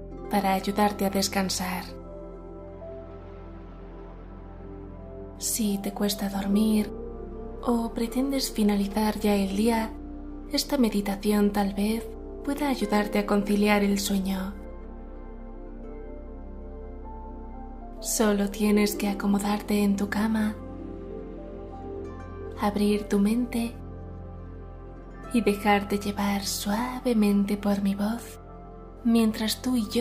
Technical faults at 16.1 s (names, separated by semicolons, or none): none